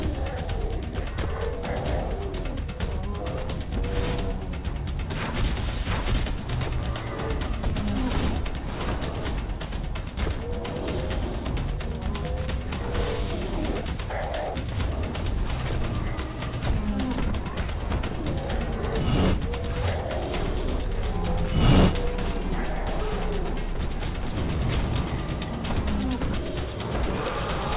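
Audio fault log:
throughout, aliasing: the whole clip has been squeezed down to a low sample rate with no anti-alias filter first, which fits a drop from 44.1 kHz to 8 kHz. Everything that lived above the 4 kHz fold point got mirrored back down into the band as unrelated, wrong tones, sitting about 20 dB under the main signal. That's why the top end sounds gritty and metallic, and the energy runs right up to 4 kHz and stops dead.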